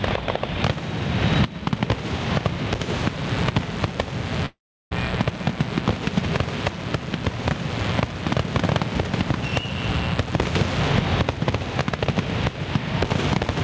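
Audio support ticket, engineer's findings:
Gain pumping, throughout. Swing around 15 dB. Likely cause: input gain set far too high, fast limiter or compressor clamping on every peak. Dynamics squashed, loud and soft levels pulled together.

Mains buzz, 2.93 to 10.92 s. Steady raspy buzz on 60 Hz, harmonics up into the kHz range, roughly 15 dB under the signal. Probable component: dimmer, rectifier or unshielded cable injecting switching spikes twice per mains cycle.

Long network dropout, 4.46 to 4.93 s. Last sound continued and faded over about 0.45 s, with about 0.36 s of that silent. Audio resumes with about 0.46 s lost. Likely cause: packets not arriving, with the receiver concealing the gap. Band above 8 kHz absent, consistent with a G.722 call path.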